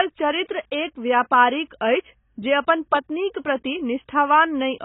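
From start to finish the speech stops dead at 3.8 kHz, sounding dull, with smeared vowels and fizzy, warbling sibilants. This is likely heavy AAC compression, consistent with AAC-LC near 16 kbps. A spectrogram shows a flat ceiling at 3.8 kHz.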